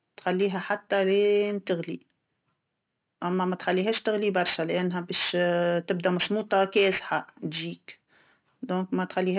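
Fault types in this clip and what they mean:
Aliasing: The speech was brought down to a lower sample rate without a proper low-pass filter first, so content above about 4 kHz folds back below that edge as false, unrelated tones, which fits a drop from 44.1 kHz to 8 kHz. Sibilants turn gritty and metallic, with the folded energy sitting roughly 15 dB under the speech. On a spectrogram, the energy runs hard up to 4 kHz with mirrored, downward-sloping streaks where rising high components reflect off the edge.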